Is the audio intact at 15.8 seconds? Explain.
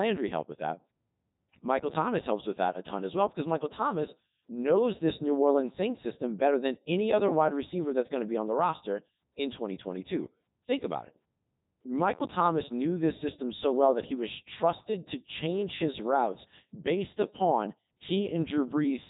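No. The Codec 2 vocoder artefacts at 15.8 s run throughout the speech: the voice is rebuilt from sine waves, sounding robotic and buzzy, with nothing above 3.8 kHz, which fits its top 3.2 kbit/s mode.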